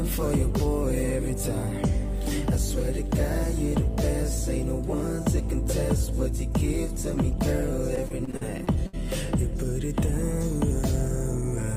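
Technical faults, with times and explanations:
7.95–8.95 s, repeated packet loss (robotic sound): choppy audio as eight gaps, the longest 64 ms, are each patched by continuing the preceding sound, together filling about a fifth of the stretch.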